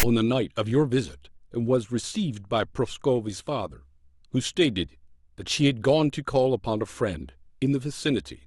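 At 0.00 to 0.03 s, the file tags are played as audio: a block of text metadata is decoded as samples, giving a loud, hard-edged rasp. The waveform shows a dense burst offset to one side of zero; the spectrogram shows a broadband vertical smear.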